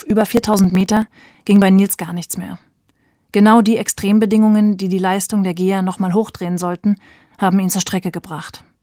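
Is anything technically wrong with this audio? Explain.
Yes. From 0.10 s to 1.62 s the speech carries periodic USB or driver dropouts: about every 0.054 s, roughly 10 ms of audio is skipped, some thirty times in all. A background task stalling the bus or driver at a fixed interval causes these small losses. They sound like a rapid, evenly spaced ticking over the speech. Gaps from network packet loss would be irregular. Here the spacing is strictly regular, and the missing audio is skipped rather than filled with silence.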